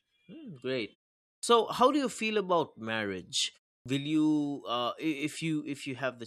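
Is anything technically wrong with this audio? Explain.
Yes, there's a clipped start after a pause, twice. At 1.38 s, following a half-second gap, roughly 51 ms goes missing right before "how do you feel". At 3.81 s, after "you feel about marriage" and a 0.31 s pause, about 47 ms is lost the same way. The output device drops into sleep during the quiet and has to wake back up, so the next utterance bursts in abruptly with its first sounds chopped.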